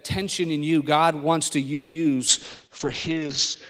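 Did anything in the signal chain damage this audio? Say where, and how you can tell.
Yes, two spots. First, a call audio freeze at the network stage, 1.73 to 1.97 s: the last sound stretches into a fading buzz or hiss for about 220 ms, then carries on where it left off. Packets were likely held up, so the jitter buffer ran dry, leaving a gap but nothing lost.

Second, a call bitrate drop at the codec, from 2.29 s to the end. The audio turns rough and muffled as the encoder falls from 32 to 7 kbps, sitting at the bottom for about 1.15 s, with the top end cut from 20 kHz to 8 kHz.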